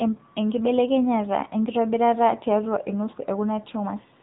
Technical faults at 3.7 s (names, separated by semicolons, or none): AMR narrowband mobile codec